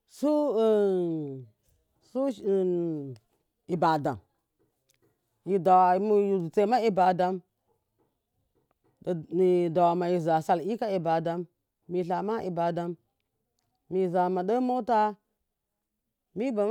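No faults are audible anywhere in the recording; the speech runs uninterrupted with nothing to flag.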